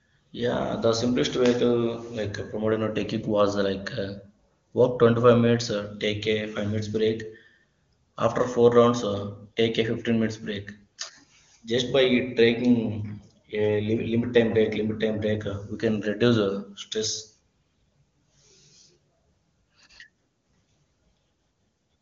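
No technical faults are audible.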